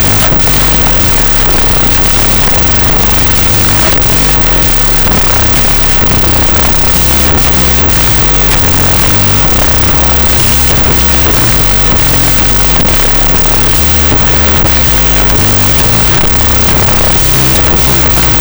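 From start to finish the audio shows a wrong sample width: 16-bit data read as unsigned 8-bit. Each sample splits into two bytes, so playback runs at half speed, an octave low. Alternate low bytes add loud hiss. The waveform is dense fuzz, and the spectrogram shows broadband noise over compressed harmonics.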